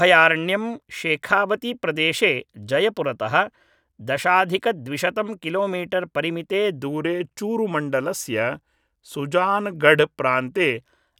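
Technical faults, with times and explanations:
6.79 to 10.78 s, wrong sample rate: the speech drops to about 92% speed and sinks about 1.5 semitones, sounding slightly lower and slower. Speed and pitch fall together. That ratio fits 48 kHz audio played back at 44.1 kHz without conversion.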